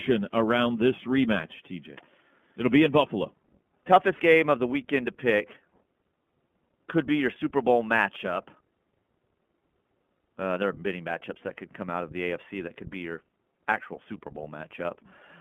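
From start to end, the speech carries the sound of the iLBC codec: nothing below 150 Hz or above 3.4 kHz, and a plainly audible rough, synthetic edge. Each chunk's excitation is coded on its own, which fits 20 ms frames in the 15.2 kbps mode.

Also throughout, there's sample clock jitter. The converter's timing wobbles by something like a microsecond or two, so each sample lands a little early or late. That error scales with how fast the waveform moves, leaving a hiss-like roughness roughly 40 dB under the signal.

At 4.16 to 4.22 s come lost iLBC frames. About 40 ms of audio went missing, which fits two dropped 20 ms frames. The decoder filled the hole by repeating the last pitch cycle blended with noise, so it sounds like a briefly held, buzzy vowel before clean decoding picks straight back up.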